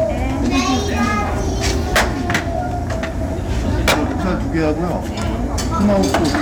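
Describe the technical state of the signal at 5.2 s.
At 5.2 s the signal is hard clipped, as it is across the whole clip. It was driven about 18 dB past what the stage could pass. A few percent of samples hit the ceiling and are cut flat. Those flattened peaks add high harmonics, heard as harsh fuzz on every loud sound.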